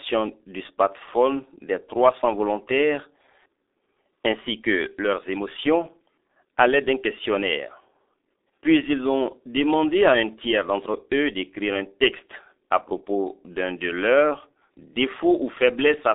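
From start to finish the speech has passed through the G.723.1 codec, an early internet-telephony coder running here at 6.3 kbit/s and confined to a telephone line band of roughly 300 Hz to 3.7 kHz. With 30 ms frames and a slowly updated voice model, the damage is heavy. Everything above the band is gone, so the voice sounds muffled and boxy, its tone turns hoarse and buzzy, and consonants smear into one another instead of landing crisply.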